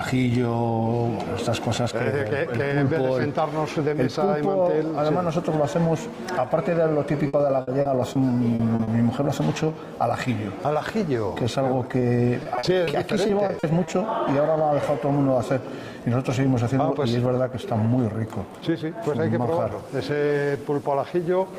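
From 7.27 to 8.17 s there is repeated packet loss (robotic sound). Four gaps, the longest 60 ms, were patched by extending the last sound, so about 20% of the stretch is synthetic and the sound turns choppy. On a spectrogram, smeared, frozen harmonics break up the normal texture.

Short concealed packet loss follows at 8.55, 8.75 and 8.83 s, each filling about 40 ms, and at 11.99 s, filling 20 ms. Each hole was bridged by continuing the preceding sound and blending back in, heard as a brief smear or wobble.

Repeated packet loss returns from 12.43 to 13.89 s. Nine gaps of up to 40 ms make up about 15% of the span, giving a choppy texture with pieces missing that appears on a spectrogram as blurred patches.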